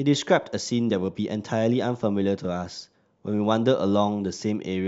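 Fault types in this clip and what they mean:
Nothing stood out on listening to this speech recording.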